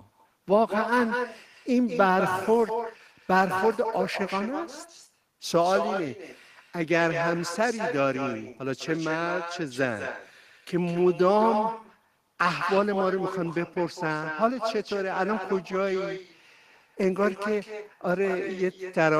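A speech recording with two separate problems. Throughout, every phrase is followed about a fifth of a second later by a quieter, thinner copy sitting about 7 dB below the direct speech. That is echo with no canceller: the far end is playing the call over a loudspeaker, its microphone is picking the playback back up, and nothing strips it out before it returns across the network.

Between 2.44 and 4.20 s there is also a steady buzz at 91.9 Hz laid over the speech. This comes from a block size mismatch (truncated): one stage hands over longer blocks than the next stage reads, and the tail of each block is discarded, producing a discontinuity at the block rate. Here the size difference is small enough that the speech runs at essentially normal speed (1.0x) and pitch, so the buzz is the main symptom.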